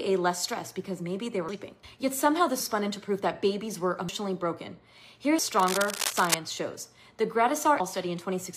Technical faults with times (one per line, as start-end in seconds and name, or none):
1.49 dropped buffer (overrun)
2.60 dropped buffer (overrun)
4.09 dropped buffer (overrun)
5.39 dropped buffer (overrun)
5.59-6.35 cable scratch noise
7.80 dropped buffer (overrun)